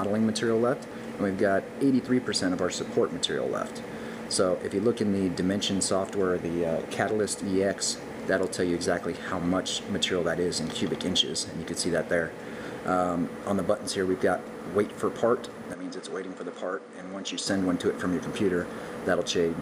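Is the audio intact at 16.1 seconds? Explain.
No. From 15.73 to 17.47 s the input was likely switched to a poorer device. The band abruptly closes off above 9.8 kHz, so the sound turns duller and roughly 5 dB quieter, a faint new noise floor appears, and there is no gap at the switch.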